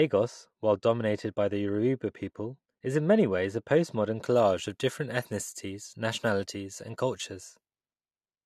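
Speech clip, and the first 4.2 seconds come across dull and muffled. That's de-emphasis applied wrongly: a treble cut meant to undo pre-emphasis that was never there, or a second pass of it. The top rolls off smoothly, sitting about 13 dB down at 10 kHz against 1 kHz, until the change at 4.2 s.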